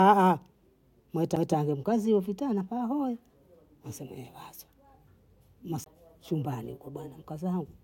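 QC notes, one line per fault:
1.35 s and 5.84–5.86 s, CD skip: the laser jumped to another turn of the spiral. A brief mute comes first, a few milliseconds and then around 20 ms, and the speech picks up from a different place, right before "mkazie vitana" the first time.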